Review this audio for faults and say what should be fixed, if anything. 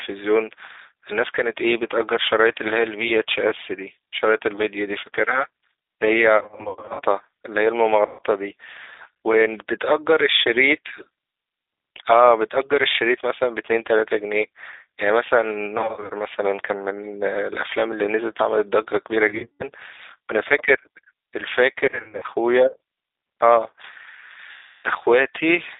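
The whole clip carries G.729 codec damage, plainly audible. The speech is confined to roughly 300 Hz to 3.7 kHz and has a rough, synthetic grain, which fits an 8 kbit/s G.729A stream rebuilding each frame from a vocal tract filter, a pitch predictor and a few pulses. That grain is what separates it from simple telephone band-limiting, which dulls the sound without roughening it. To prevent it, carry the call on a wideband or higher-bitrate codec instead of G.729.

VoIP packet loss concealed by the speech codec occurs at 6.37 to 7.02 s, 8.06 to 8.21 s, 15.78 to 16.13 s, 19.28 to 19.68 s, 21.86 to 22.26 s and 24.51 to 24.88 s. Where packets were lost, the decoder stretches its last pitch and filter into a buzzy tone or coloured noise that fades, and the voice stays weak afterward. That fading tail separates it from plain dropouts, which simply go silent. To prevent it, add a jitter buffer with forward error correction or redundancy on the network path.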